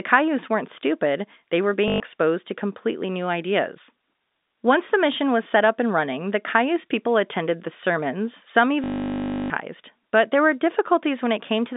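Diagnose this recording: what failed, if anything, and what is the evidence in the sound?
Network packet loss with last packet repeated: at 1.88–2.0 s, after "weren't stupid they were", and 8.84–9.5 s, after "attended the sermons some", the receiver replayed stale audio, giving a robotic 50 Hz stutter that fits 20 ms packets.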